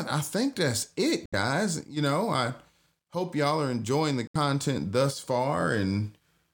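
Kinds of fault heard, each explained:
Bluetooth dropout: speech drops to silence at 1.26 to 1.34 s, after "I think that's it", and at 4.27 to 4.36 s, after "y'all are enjoying the", then resumes as if it had played on. This is likely late packets being discarded, with each gap fitting about three lost frames.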